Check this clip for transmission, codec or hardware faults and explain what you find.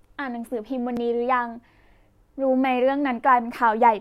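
One fault stands out in the speech, at 0.97 s. There the sound skips forward, with no gap of silence. Roughly a few milliseconds of audio are missing, and the sound on either side is butted straight together. This is most likely a dropped buffer (overrun): the recording software failed to read a short block of samples before the hardware wrote over it. That block was lost.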